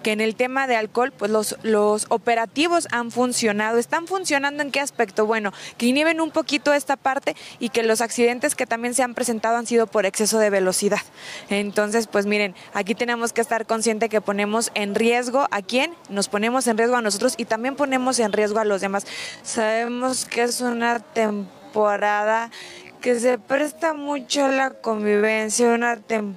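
At 19.10 s the pace suddenly halves and stays that way to the end, while the pitch does not drop. This is a time-stretched section. Software likely stretched the audio by repeating short pieces to hold pitch. The slowed part drags.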